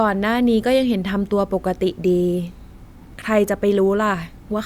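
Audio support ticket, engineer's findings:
Listened to the full speech recording and found nothing that warrants follow-up.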